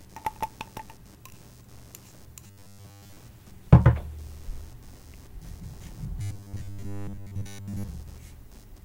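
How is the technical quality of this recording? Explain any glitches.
The recording has two technical problems: a constant computer interference layer and two stretches of robotic buzzing.

Computer activity noise runs throughout. Processor and peripheral load disturb the shared audio ground, adding pulsing interference at around 100 Hz, roughly 25 dB below the sound.

Robotic sound from repeated short buffers occurs from 2.46 to 3.16 s and from 6.22 to 7.88 s. New audio likely arrived too slowly, so short slices were replayed in place of most of the real audio. This imposes a rigid, metallic 100 Hz buzz, consistent with repeats about 10 ms long.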